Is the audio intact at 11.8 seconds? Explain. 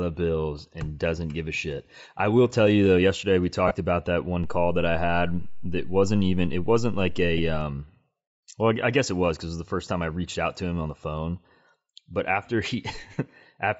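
No. At 11.8 seconds, as across the whole speech clip, the upper spectrum is thinned and replaced by grainy, breathy noise, most likely Bluetooth LC3 compression at a rate fitting about 32 kbps in 10 ms frames. A plain low-pass would leave the top silent, not filled with hiss.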